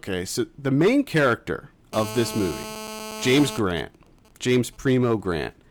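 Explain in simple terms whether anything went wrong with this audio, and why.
From 1.93 to 3.58 s a harsh, raspy buzz sits under the speech. That's GSM phone buzz: a 2G phone nearby on a call pulses its radio 217 times a second, and the audio gear picks those pulses up as a steady, gritty tone.

Right after, from 3.59 to 4.79 s, the buzz turns into quieter, even ticks with a longer buzz twice a second. Those are GSM signalling bursts, from a 2G phone on a call but sending only brief groups of pulses while its user stays silent.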